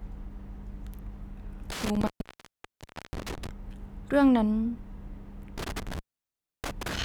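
From 1.70 to 3.49 s and again from 5.58 to 7.03 s, the speech drops out through intermittent contact, a loose connection opening for about 1.06 s and then 0.65 s, with crackly edges. The waveform flattens to a near-silent band, and the spectrogram shows broadband clicks framing a faint hiss floor.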